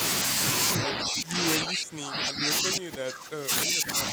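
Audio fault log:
0.78–1.43 s and 1.60–4.13 s, speech suppressed in double talk: the level sinks by about 15 dB, then by about 25 dB, dipping for roughly 2.7 seconds. This is likely an echo canceller attenuating overlapping talk.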